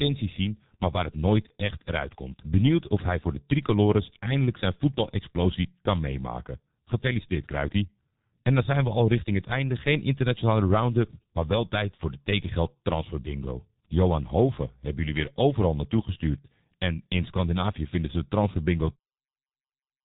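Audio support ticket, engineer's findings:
Muffled, hoarse speech throughout, consonants smeared, no content above 3.8 kHz. Heavy low-rate G.723.1 codec damage: 30 ms frames and a slowly updated voice model, consistent with about 6 kbit/s. End fade-out near 19 s is clean editing.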